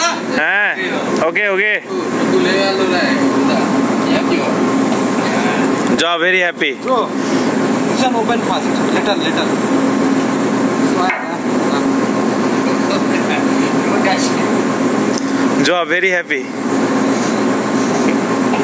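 Gain pumping runs throughout: the gain swings by around 15 dB under loud sounds, likely from excessive gain hitting a fast limiter. The waveform envelope looks flattened and pulses.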